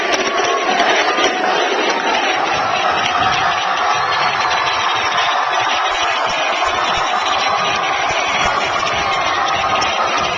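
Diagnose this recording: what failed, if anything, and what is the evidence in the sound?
Skip ahead at the network or jitter-buffer stage: a stretch of audio was discarded while later audio was already queued, so playback jumps straight forward at 0.65 to 0.67 s. About a second and a half of sound is missing, and the two sides are spliced with no gap.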